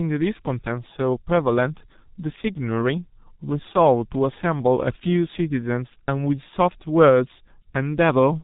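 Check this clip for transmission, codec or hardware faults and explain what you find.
One fault runs through the whole speech clip: G.723.1 codec damage. The codec passes nothing above 3.8 kHz, and its low-rate 30 ms frames and sluggish voice model blur detail, at a bitrate near 6 kbit/s, leaving speech heavily muffled, hoarse, with smeared consonants.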